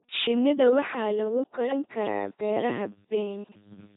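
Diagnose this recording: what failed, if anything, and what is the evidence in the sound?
Codec stage: the speech has been through an LPC-10 vocoder, heard throughout as a buzzing, robotic voice with harsh voiced/unvoiced switching. A spectrogram shows rigid pulse-train harmonics or flat noise, nothing above 3.8 kHz, and heavy damage consistent with 2.4 kbit/s coding.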